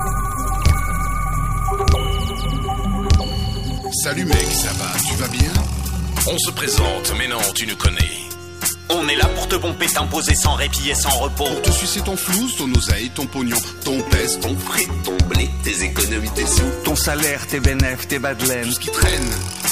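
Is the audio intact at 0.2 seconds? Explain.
No. A doubled audio track runs from the start to 3.78 s: a second, full-band copy trails about one and a half seconds behind, around 5 dB quieter, with no decay or room colour. It's likely from an out-of-step edit or slower capture path, and it cuts off abruptly.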